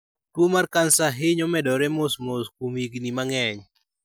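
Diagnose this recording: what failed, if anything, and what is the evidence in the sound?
Nothing seems to have gone wrong here; as far as I can hear, nothing in this speech recording points to trouble at any stage of the chain.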